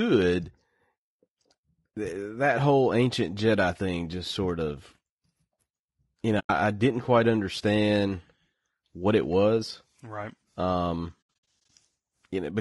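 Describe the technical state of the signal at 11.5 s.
At 11.5 s the sound falls into AAC frame loss with muting, spanning 11.21 to 11.7 s. Lost frames were zeroed, leaving soft-faded holes totalling 240 ms, with runs of up to about 70 ms. The sound is also rough and grainy throughout, with noise between harmonics. That likely comes from low-delay AAC compression at a low bitrate, consistent with about 32 kbps.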